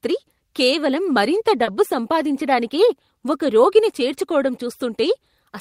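At 1.63 to 1.69 s the speech has a short concealed packet loss: about 40 ms of audio arrived too late, so the decoder extrapolated the preceding sound and crossfaded back. It is heard as a brief smear; a spectrogram shows the preceding sound continued without fresh detail.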